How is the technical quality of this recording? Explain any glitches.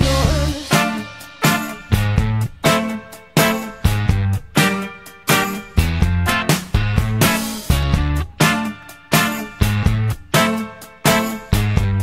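The recording has one recurring glitch. From 6.82 s to 11.84 s, periodic USB or driver dropouts skip about a millisecond of audio every 1.0 s, heard as regular clicks.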